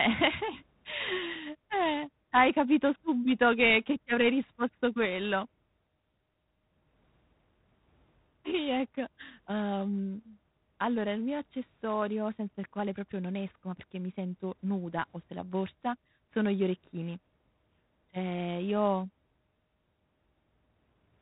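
Right through the speech there's G.726 ADPCM damage, a harsh rasping hiss tracking the level that suggests 24 kbit/s, with nothing above 3.9 kHz.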